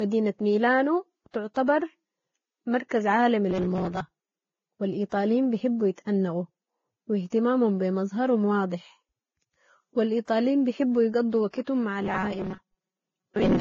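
Speech, and the whole thing has that layered, smeary lossy sound with nothing above 7.1 kHz. The mix of artefacts points to transcoding between lossy codecs, likely a low-bitrate AAC-LC encode at 24 kbit/s later re-encoded as Vorbis at a similar rate, around 23 kbit/s. Each pass piles its own swirl on the earlier one, and the 7.1 kHz ceiling carries through the chain. On top of that there's robotic sound from repeated short buffers twice: from 3.49 to 4.01 s, just after "مركز عالمي", and from 12.02 s to the end at 13.60 s, after "بحبوا يقضوا وقتهم مع". The speech collapses into a stiff metallic buzz at 188 Hz, which fits a chunk of roughly 5.3 ms being looped, with about half the material repeated rather than fresh. That's most likely the playback side starving for data and padding the gaps.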